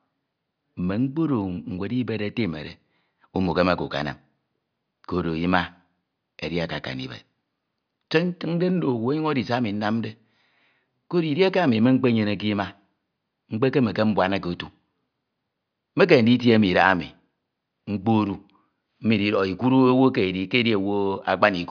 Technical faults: none

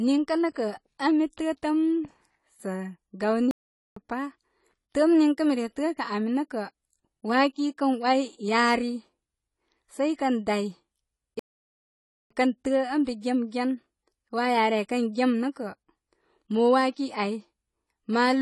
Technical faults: AAC compression; playback stall

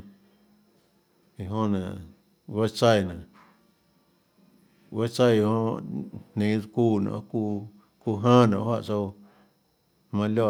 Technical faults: none

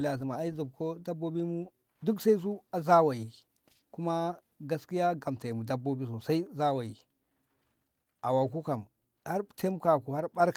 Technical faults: none

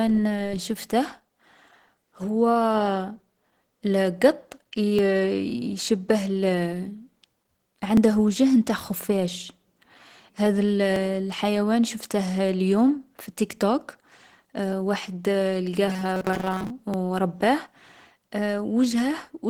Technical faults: Opus compression; audio missing between chunks; robotic sound from repeated short buffers

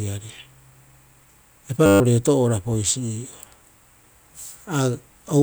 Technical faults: system hang loop

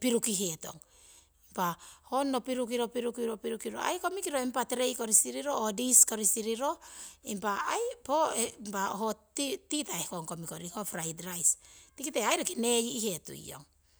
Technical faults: none

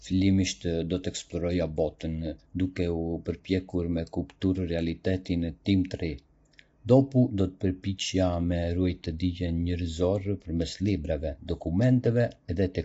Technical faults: low-delay AAC compression

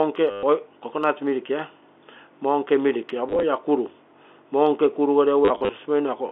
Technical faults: packet loss with last packet repeated

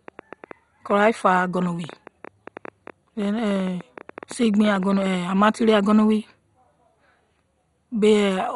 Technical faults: MP2 compression; train of clicks

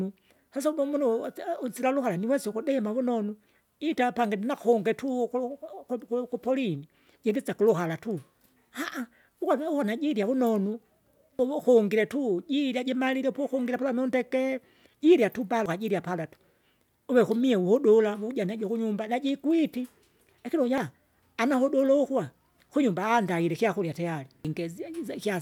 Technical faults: damaged data in a compressed stream

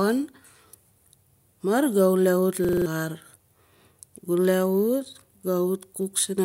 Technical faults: system hang loop

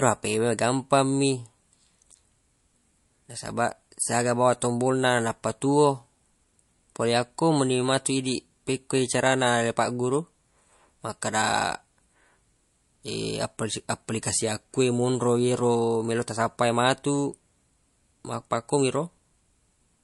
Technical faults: MP3 compression

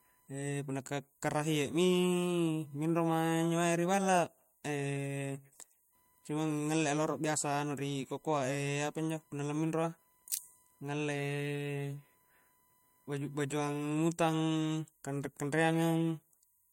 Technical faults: computer activity noise

